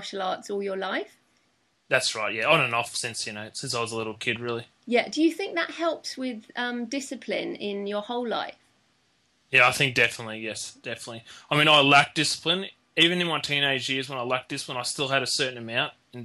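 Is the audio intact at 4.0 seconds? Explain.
Yes, at 4.0 seconds the audio plays through intact, with no dropout, click, distortion or other fault at that moment.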